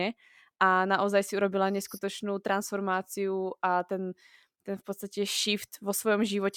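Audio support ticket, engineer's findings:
No faults found in recording.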